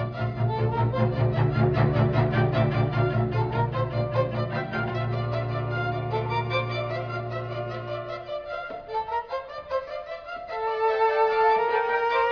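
Nothing stood out as a technical fault on listening to this audio.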